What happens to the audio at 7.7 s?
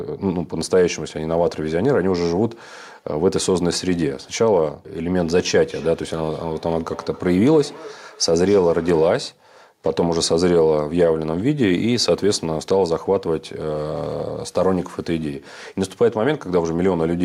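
Two devices on the same call are sharing one room, so the loudspeaker of one is replaying what the other's microphone sent, and that microphone captures it again where its own echo canceller cannot remove it. The result at 7.7 s is feedback echo between two devices, running from 5.71 to 9.35 s: the speech returns at a fixed spacing of roughly 300 ms, thinner and more ringing, peaking about 19 dB below the direct speech.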